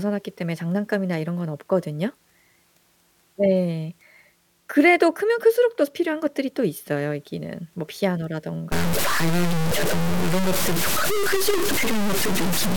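From 8.72 s to the end, the speech turns harsh and grainy, the distortion tracking each syllable and quiet passages sputtering or dropping out. This is low bit depth without dither, likely about three bits truncated, leaving error roughly as loud as the speech itself.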